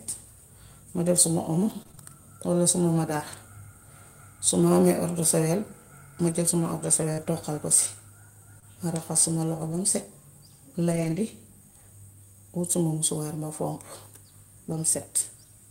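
From 1.83 to 1.99 s, just before "walla suma madaar", there is repeated packet loss with a robotic sound. Four short holes, the longest about 26 ms, arrive in quick succession. The receiver patches each one by extending the last sound, so about half of this short span is guessed audio. Because the patches pile up instead of standing alone, the sound turns choppy rather than just briefly smeared.

Lost packets rebuilt from error correction come next, from 6.29 to 6.35 s, right after "amee ordusawel ma". The same thing recurs at 7.18 to 7.28 s, 9.72 to 9.78 s, 10.92 to 11.18 s and 14.72 to 14.78 s. In each case a low-bitrate backup copy carried in the following packet stands in for the missing one. The sound never drops out, but it turns rougher and grainier for 40 to 60 ms, and for about 140 ms in the longest stretch near 11 s.

Short concealed packet loss occurs at 7.13 to 7.20 s, overlapping the start of the rebuilt stretch there, and again at 8.60 to 8.64 s. 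Here no backup copy was available, so the decoder invented roughly 45 ms and then 24 ms of audio by continuing the preceding sound before blending back. This gives a brief smear or wobble. Unlike the error-correction repairs, the content in these gaps is guessed rather than recovered, and unlike the burst at 1.8 s, each one is isolated and passes quickly.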